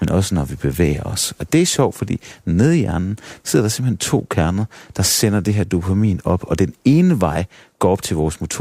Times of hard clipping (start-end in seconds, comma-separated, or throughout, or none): 7.84-7.86